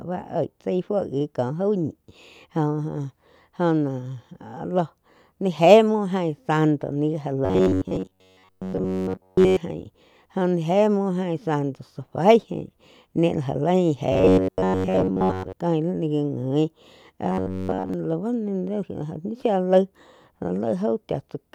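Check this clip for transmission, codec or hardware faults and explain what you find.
The speech has one recurring fault, robotic sound from repeated short buffers, at 7.45 to 9.57 s (just after "santo li ja"), 14.12 to 15.53 s and 17.32 to 17.94 s. The voice becomes a rigid metallic buzz near 94 Hz that loosely tracks the words. This is likely from roughly 10.7 ms chunks being replayed while most of the real audio, and all of it in the last stretch, is skipped.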